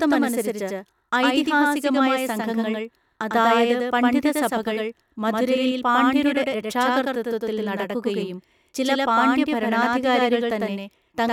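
From start to finish the speech carries a doubled audio track: a second full-band copy trails the original by roughly a tenth of a second at about the same level, with no decay or room colour. This most likely comes from a slower second capture path mixed back in.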